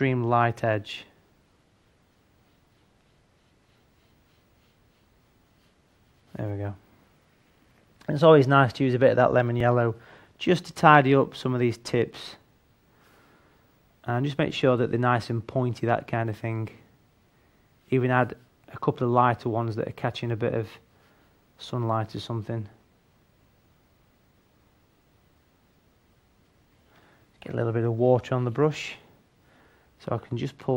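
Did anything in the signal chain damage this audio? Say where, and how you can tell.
Yes. At 9.6 s there is a tiny skip where the waveform jumps, the sign of an overlap between stream segments in delivery or playback. Two adjacent segments' timestamps overlapped, so the player trimmed about 10 ms of audio that was never actually duplicated.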